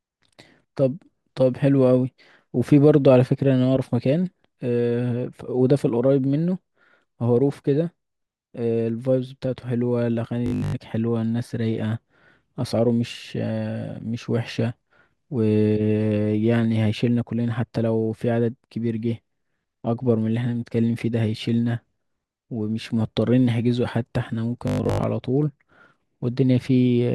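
Speech, with robotic sound from repeated short buffers at 10.46–10.76 s and 24.68–25.04 s. Both spans turn into a rigid metallic buzz near 50 Hz, which fits a 20 ms chunk being replayed. Most of the real audio there is lost. Late-arriving audio data is the likely cause.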